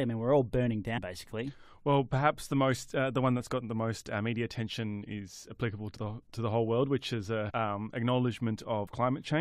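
Compressed frames skipped in this speech clip at 0.96–0.98 s after "mean we're all burning", 5.96 s between "media attention is applicable" and "the to the whole", 7.49–7.51 s after "whole world which is", and 8.86 s. At each point the sound jumps ahead by roughly 50 to 150 ms, in steps that fit frames of about 23 ms that are missing or were rejected by the decoder.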